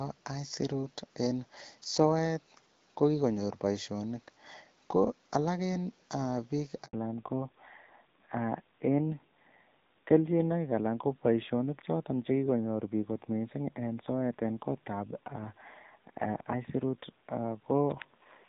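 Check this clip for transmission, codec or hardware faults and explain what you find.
Two related faults turn up, both right around the 7-second mark, and they read like a single network event.

First, a handover gap from 6.85 to 6.93 s. The speech cuts out for about 80 ms and comes back on a different link. While the phone was switching the call between networks, no speech frames got through, so the voice drops away almost instantly and there's dead air until the new connection picks up. Whatever was said in that stretch is simply missing. It's not muffled or garbled.

Right after that, from 6.93 s to the end, there's a fallback to narrowband. Before the gap the call has that HD Voice openness you'd expect from AMR-WB at around 12.65 kbit/s. After it, nothing comes through above 4 kHz, so the sibilants and airy consonants lose their edge and the voice sounds duller, boxier and a bit rougher. 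That hard 4 kHz ceiling and the added coarseness fit a switch to an older narrowband codec such as AMR-NB at 7.4 kbit/s.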